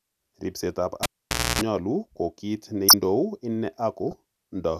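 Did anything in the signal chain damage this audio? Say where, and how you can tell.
Yes. In the analogue wiring, the cable was pulled and plugged in between 1.03 and 1.61 s. A pop starts about 0.53 s of near silence, then a 60 Hz mains buzz lasts 0.28 s before a second pop. The spectrogram shows vertical broadband clicks and horizontal 60 Hz harmonic lines.

In the codec, a corrupt frame was decoded at 2.88 to 2.94 s and again at 4.11 to 4.14 s. Flipped bits spread energy into the wrong frequencies, giving short chirpy bursts across a few frames. On the spectrogram these are brief misplaced blocks. The first burst is far stronger and the second is about 30 dB quieter.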